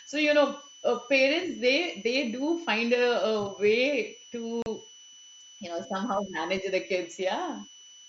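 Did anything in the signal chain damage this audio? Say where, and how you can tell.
Yes. A switching supply whistle sits under the speech for the whole clip, a thin tone drifting between about 2.96 and 3.0 kHz, roughly 25 dB below the speech. This is analogue-stage contamination: a switch-mode regulator running in an audible burst mode, or two converters beating, couples its ripple into the microphone or preamp supply. The pitch wanders slightly because the regulator's switching rate shifts with load.

Unconcealed Bluetooth headset packet loss punches a hole from 4.62 to 4.66 s, about 38 ms of abrupt dropout with hard edges at both ends. This is a network-stage fault on the radio link between headset and phone. The gap length fits five consecutive 7.5 ms wideband frames going missing, and nothing was synthesized to bridge them, so the sound simply stops and restarts. The mSBC wideband codec carrying the link adds only a light graininess on louder sounds.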